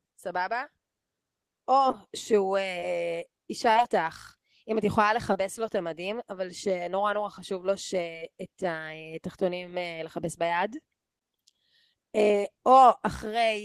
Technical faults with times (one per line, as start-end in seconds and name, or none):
1.91-1.95 short concealed packet loss
2.79-2.84 short concealed packet loss
3.72-3.77 short concealed packet loss
5.33-5.37 short concealed packet loss
8.13-8.20 short concealed packet loss
12.31-12.35 short concealed packet loss